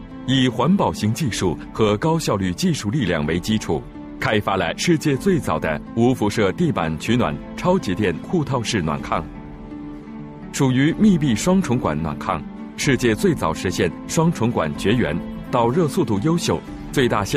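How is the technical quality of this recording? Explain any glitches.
No glitches are audible anywhere in the recording, so there is nothing to explain.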